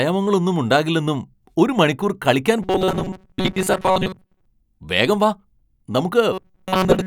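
From 2.63 to 4.46 s, right after "ഉണ്ടാകില്ലെന്നും ഒരു മണിക്കൂർ കളിക്കാൻ", the speech turns into robotic sound from repeated short buffers. A rigid metallic buzz at 188 Hz sets in, and the speech survives only in rough outline until "വേഗം വാ". It returns from 6.33 s to the end. The likely cause is audio arriving too slowly. A slice of about 5.3 ms loops in place, and most of the real sound is skipped.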